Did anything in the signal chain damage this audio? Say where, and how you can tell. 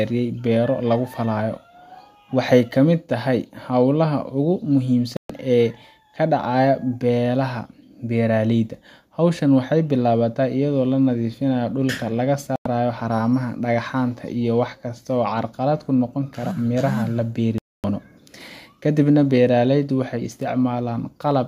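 Yes: a digital broadcast dropout at reception. The receiver muted on failed frames, cutting the speech to silence at 5.17–5.30, 12.56–12.66 and 17.58–17.84 s.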